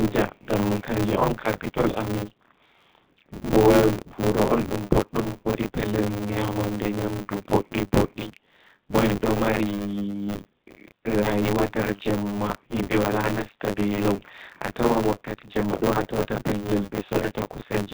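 From start to finish the speech sounds thin, slightly rough and synthetic, with nothing above 4 kHz and a grainy, processed edge on every syllable. That is the G.729 codec at 8 kbit/s. Instead of sending the waveform, it rebuilds the speech every 10 ms from a model of the vocal tract, a pitch predictor and a handful of pulses, so fine detail and all the upper band are lost. The damage is plainly audible.

Throughout, a steady robotic buzz at 100 Hz rides on the speech, rattling whenever sound is present and dropping away in the gaps. This is buffer tearing. The program filling a ring buffer and the hardware draining it have drifted out of step, so they cross inside every period, which points to periods of about 10 ms. In each period something like two fifths of the audio is stale material from roughly 30 ms earlier, spliced in with hard joins on either side.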